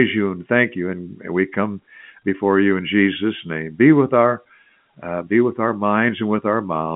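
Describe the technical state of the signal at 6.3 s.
At 6.3 s the speech is intact, carried as ordinary G.711 telephone coding that keeps it within the line band of 150 Hz to 3.4 kHz with nothing above 3.7 kHz.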